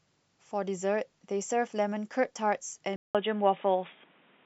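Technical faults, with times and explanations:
2.96 to 4.46 s, input switched to a poorer device: capture likely moved to a lower-grade input. After a 0.19 s gap, nothing passes above 3.8 kHz, so the sound turns dull and boxy, shifts in level by roughly 5 dB, and gains new background noise roughly 35 dB down.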